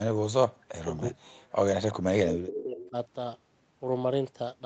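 From 0.15 to 0.93 s the speech sinks, falling by as much as about 40 dB across most of that stretch, with a shorter dip of about 25 dB between 1.1 and 1.16 s. This is speech suppressed in double talk. The likely cause is that both ends were talking at once, and the echo canceller could not tell this talker apart from the loudspeaker echo, so it turned everything down.

At 1.9 to 1.95 s a faint, delayed copy of the speech comes through, about 20 dB below the main level. This is an echo leak, trailing the original by 374 ms. The likely cause is that the far end plays the call on a loudspeaker and its echo canceller left some of the microphone pickup in the return signal.

Between 2.02 and 2.96 s the speech is pushed down again, by up to about 30 dB, in another episode of double-talk suppression. Inside that same stretch two more scraps of leaked echo surface at the same 374 ms delay. The first, at 2.54 to 2.63 s, is louder, only about 10 dB under the speech. 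The second, at 2.8 to 2.9 s, sits about 20 dB down, while the suppressed speech and its echo overlap.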